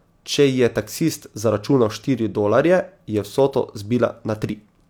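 No technical faults can be heard at any point in the recording, and the signal holds steady throughout.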